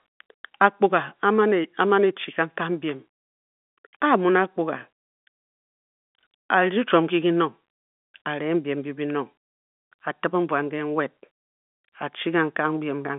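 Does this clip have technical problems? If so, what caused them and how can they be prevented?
No, nothing stood out on listening to this telephone-band speech that would count as a technical problem, so there is nothing here to prevent.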